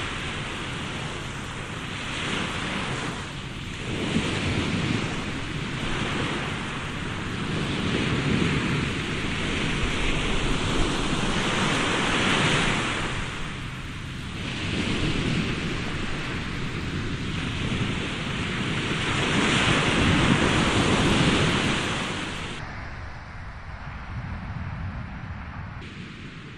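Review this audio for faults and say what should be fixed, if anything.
A section at the wrong speed runs from 22.59 to 25.82 s. The audio plays at 0.619 times its proper rate, so it sounds about seven semitones lower and drawn out, likely from being fitted to the wrong clock. Unlike a pure pitch-shift fault, the timing slows along with the pitch, and both return to normal at 25.82 s. To prevent it, confirm that every section's sample rate matches the project or playback clock before editing or export.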